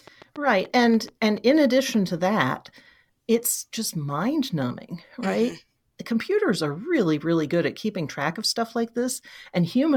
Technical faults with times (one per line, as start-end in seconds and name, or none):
0.07-1.95 train of clicks